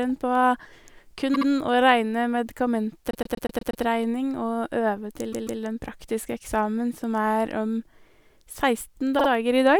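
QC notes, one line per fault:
1.33–1.48 s, 3.11–3.83 s, 5.32–5.61 s, 9.18–9.28 s, repeated frames: the decoder replays the same block (72 ms twice, 120 ms six times, 144 ms twice, 48 ms twice), so the speech stutters and runs longer.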